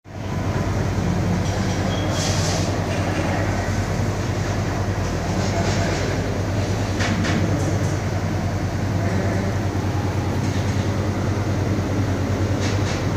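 From start to finish the sound carries a doubled audio track: a second, full-band copy follows roughly a fifth of a second behind at about the same level. It is a dry, exact repeat with no decay, which likely comes from the signal being captured twice, once through a slower path.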